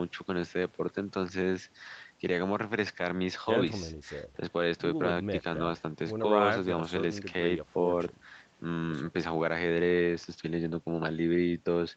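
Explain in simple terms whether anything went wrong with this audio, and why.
Nothing went wrong here: the speech simply went through the usual microphone processing of a call and a normal WebRTC call path, which keep the sound below 8 kHz, and that slightly narrower, phone-like quality is what an ordinary call produces.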